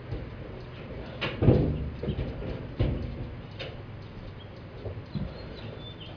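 Nothing in the audio points to a technical fault: the signal holds steady throughout, with no gaps, level disturbances or added noise to be heard.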